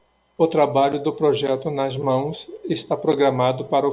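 Nothing in the speech stood out as a technical problem on listening.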